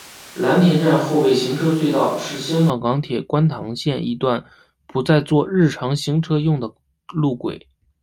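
From the start to 2.70 s, there is likely a switch to a distant microphone: the speech is roomy, hollow and bass-light, with room noise about 25 dB down, changing suddenly before "港铁观塘".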